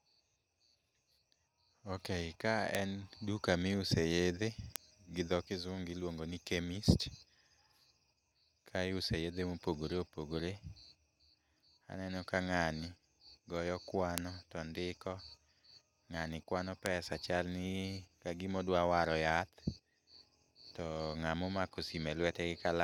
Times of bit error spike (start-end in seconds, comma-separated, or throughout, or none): 2.75, 4.76, 14.18, 16.86